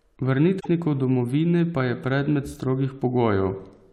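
At 0.56–0.66 s, before "domovine pa je", damaged data in a compressed stream desyncs the decoder, with spectrogram smear and jagged waveform break.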